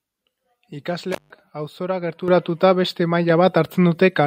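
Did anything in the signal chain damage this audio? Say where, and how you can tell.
Yes: call processing stepped the microphone volume up at 2.28 s (about 8 dB) and 3.3 s (about 4 dB), so speech and background jump together.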